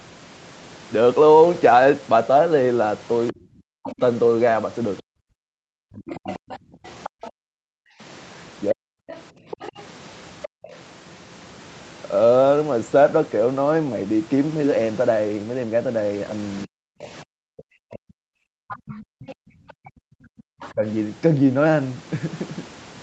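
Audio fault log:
3.28–7.31 s, other side's voice leaking through: a second voice sits about 15 dB under the talker, likely loudspeaker echo the canceller left in the microphone.
3.32–8.87 s, speech suppressed in double talk: the talker's own voice dips by up to about 40 dB in pieces totalling some two seconds, likely because both sides spoke at once.
7.76–10.63 s, background gated by the echo canceller: the room sound drops by up to about 40 dB for around half a second in total and returns.
9.07–10.76 s, other side's voice leaking through: the far voice returns about 15 dB below the talker, likely residual echo the canceller did not remove.
16.65–20.84 s, speech suppressed in double talk: the talker again fades and breaks up, up to about 40 dB down for roughly two seconds in total, likely while the far side was speaking.
17.01–17.08 s and 18.69–20.72 s, other side's voice leaking through: a brief 70 ms blip, then a longer stretch of far voice about 20 dB under the talker, likely leftover loudspeaker echo.
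19.53–20.47 s, background gated by the echo canceller: the ambience falls away by up to about 40 dB for about a second, a gap in the room tone.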